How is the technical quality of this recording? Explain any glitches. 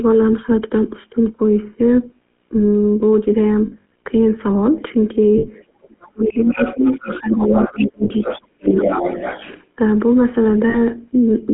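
The recording is heavily degraded. The whole clip carries GSM coding damage, there are four short dropouts, and the middle section, from about 5.8 to 9.6 s, is disrupted by a second voice breaking in and the main talker being pushed down.

GSM full-rate codec, throughout: The coder keeps only a model of the vocal tract and a sparse pulse train to drive it, which fits the 13 kbps GSM full-rate codec. The line passes just 200 Hz to 3.4 kHz, so the audio sounds boxed-in and narrow. The damage is plainly audible as a buzzy, gravelly roughness.

Lost GSM frames, at 3.66–3.9 s, 5.38–5.48 s, 8.04–8.12 s and 10.7–10.76 s: In each gap the decoder reused the settings of the last good frame. You hear a brief metallic, ringing smear where the speech should be. The first event is the worst, with about 140 ms of loss scattered across 240 ms and runs up to roughly 70 ms. The later ones are shorter, at about 60, 60 and 40 ms.

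Other side's voice leaking through, at 5.82–5.86 s, 6.23–8.41 s and 8.67–9.64 s: This is likely the far-end voice playing on the talker's loudspeaker and surviving echo cancellation into the microphone. The first leak is a faint scrap, about 35 dB down. The two longer stretches sit only about 10 dB below the main voice, so a second voice comes through underneath.

Speech suppressed in double talk, at 5.86–7.53 s and 7.69–8.88 s: With both voices active at once, the echo canceller likely could not tell the talker from the echo and attenuated everything. The main voice is turned down for about a second in each span. The deepest drops are roughly 30 dB in the first span and roughly 40 dB in the second.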